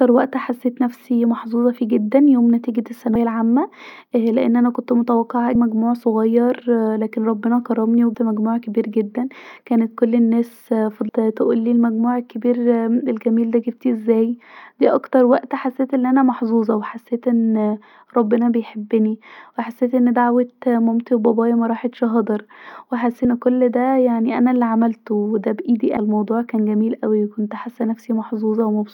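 Compressed frames skipped at 3.15, 5.55 (after "لأن انا كنت متوقعه"), 8.14, 11.09 (between "جدا كانت كل الناس" and "تقولي المجموع"), 23.25 and 25.97 s (between "انا عملته ودا بايدي" and "الموضوع كان"). Runs of 32 ms frames go missing, so the speech jumps ahead by roughly a tenth to three tenths of a second.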